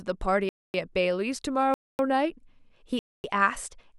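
Hard-edged holes of silence cut into the speech at 0.49 to 0.74 s, 1.74 to 1.99 s and 2.99 to 3.24 s. This is a gap between chunks: audio delivered in 1-second chunks has 250 ms of silence inserted at each join, interrupting the sound without losing any.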